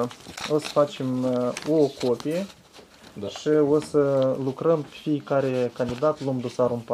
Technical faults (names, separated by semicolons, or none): compressed frames skipped